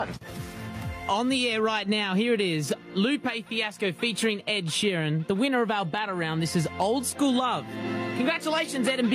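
The whole clip, all nine seconds or so, has gain pumping: the level keeps ducking down on every loud moment and climbing back up afterwards, with a swing of roughly 15 dB. Loud and soft passages end up much closer in level than they should, so the sound comes across squashed. The likely cause is the input gain being set far too high for the microphone, with a fast limiter or compressor clamping down on each loud sound.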